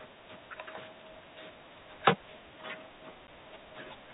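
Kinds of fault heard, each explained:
Packet loss filled with silence: a single packet of speech never arrived, and the receiver played silence in its place, leaving a 10 ms hole at 3.27 s with abrupt edges, within the narrow telephone band of the G.711 coding carrying the call.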